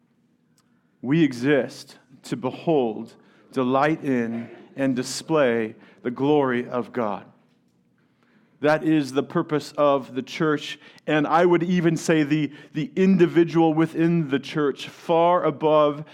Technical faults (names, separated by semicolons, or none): none